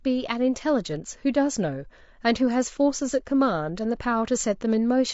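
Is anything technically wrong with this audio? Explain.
Yes. Throughout the speech, the voice sounds rough and grainy, likely from low-delay AAC compression at a low bitrate, around 32 kbps. Its short frames resolve pitch harmonics poorly, so a spectrogram shows smeared harmonics, noise filling the gaps between them, and a thin, synthetic-looking top band.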